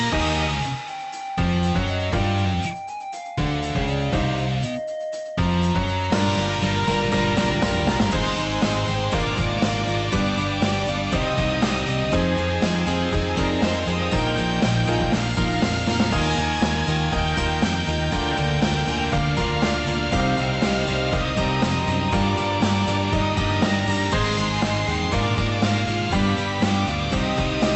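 No technical faults turn up anywhere in this audio, which comes through a call path whose codec band-limits it to about 8 kHz.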